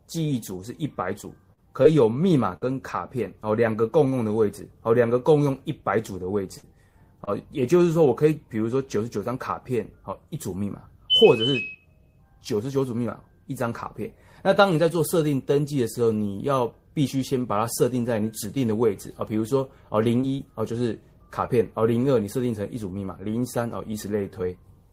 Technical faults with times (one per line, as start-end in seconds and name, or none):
1.21-1.25 short concealed packet loss
1.53-1.86 short concealed packet loss
2.56-2.63 burst of packet loss
6.57-6.65 burst of packet loss
7.25-7.29 short concealed packet loss
20.21-20.40 short concealed packet loss